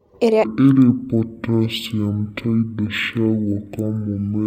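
From 0.44 s to the end, stereo read as mono: interleaved left and right samples run as one channel, so the speech plays at half speed, an octave low.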